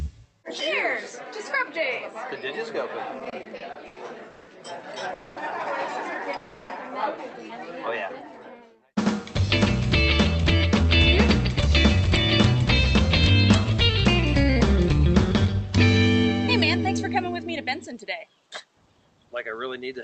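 From 3.19 to 4.49 s there's a patch of repeated stalls, basically a stutter. Packets kept turning up late, so the jitter buffer ran dry eight separate times. Each time, the receiver just kept the last bit of sound going until fresh data showed up. That adds up to about 400 ms of filler, with the longest hold at 170 ms, which is nearly a third of that stretch. Nothing actually gets lost, but the sound drags and catches.

Then come two call audio freezes, at 5.13 to 5.38 s and 6.36 to 6.72 s. In each one the sound hangs as a buzzy, held continuation, 230 ms the first time and 330 ms the second, and it never drops to silence. Afterwards the sound picks up exactly where it stopped, so each freeze just pushes everything later by that amount. The likely cause is packets getting held up in transit.

Last, there are two stretches of jitter buffer speed-up. From 9.40 to 15.55 s the receiver is working off a backlog of buffered audio, running at 103% and trimming out roughly 200 ms as tiny pitch-period slices. 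The pitch stays put. From 19.36 to 19.98 s it happens again at 107%, shaving off around 50 ms, and there it does sound hurried. Throughout, the call codec's top end stops around 8 kHz.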